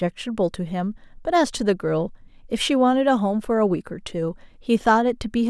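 No technical faults can be heard anywhere in this recording. Nothing interrupts or alters the speech at any point.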